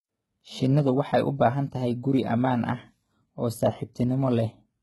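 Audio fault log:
Throughout: HE-AAC compression, heavy. The treble above the low band is likely rebuilt by spectral band replication, so sibilants sound gritty and metallic with mismatched harmonics. Nothing is present above 11.8 kHz, and the damage fits a 16 kbps HE-AAC v2 stream.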